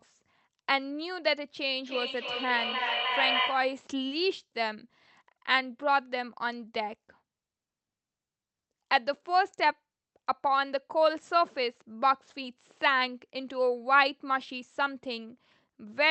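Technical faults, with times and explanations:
1.83–3.87 s, feedback echo between two devices: the speech returns roughly every 300 ms, up to about 3 dB below the original, as a second device's playback re-enters a microphone whose echo canceller ignores it.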